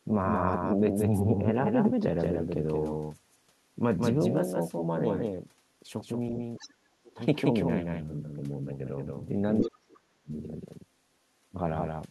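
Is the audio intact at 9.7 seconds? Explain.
No. At 9.7 seconds the speech falls inside a stretch of speech suppressed in double talk, running from 9.6 to 10.33 s. The talker's level collapses by roughly 40 dB at its deepest, with the voice dipping and breaking up for about 0.7 s. The likely cause is an echo canceller that heard both sides talking at once. Unable to separate the local talker from the loudspeaker echo, it turned everything down together.

At the start of that dip, from 9.62 to 9.68 s, a brief scrap of the other side's voice leaks through. It sits around 25 dB below the talker and is short. It is likely loudspeaker playback of the far end that the echo canceller failed to remove fully from the microphone, so a fragment of the remote voice slips into the captured signal just as suppression begins.

Underlying this moment, as across the whole recording, is a doubled audio track. 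A second full-band copy trails the original by around 200 ms at roughly 5 dB lower. It has no reverberant tail or room colour, just a dry repeat of the same sound. That points to the audio likely being captured twice, once through a slower path, and mixed back together out of step.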